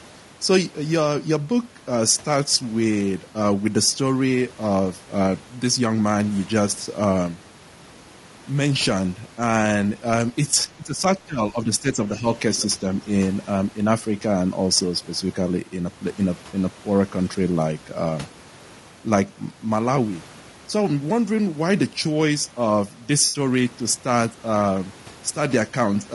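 Across the whole recording the speech has a rough, grainy texture, with noise filling the gaps between harmonics and a synthetic-sounding top band. This is likely low-delay AAC compression, AAC-ELD at a low bitrate around 32 kbps. Its short frames resolve pitch poorly, which is why the coarseness stays constant rather than coming and going like packet damage.

From 10.65 to 12.25 s the talker's level sags in pieces, dipping by roughly 15 dB at its deepest and losing about a second in total. This is likely speech suppressed in double talk: the echo canceller, hearing both sides at once, turned the near talker down. Unlike a network dropout, the sound thins and ducks rather than breaking into noise.

Just after, at 12.58 to 12.66 s, a brief scrap of a second voice appears, about 20 dB below the main speech. This is likely the other side's voice leaking through, loudspeaker echo that the canceller failed to remove. 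It is a separate, faint voice, not a distortion of the talker.

At 16.49 to 16.55 s, about 40 ms goes missing and is replaced by a short smeared, phasey patch, which fits two AAC frames lost and filled by concealment from the last good spectrum. A longer one of about 80 ms at 23.25 to 23.39 s fits four lost frames. Unlike double-talk suppression, these are abrupt, momentary smears rather than gradual level dips.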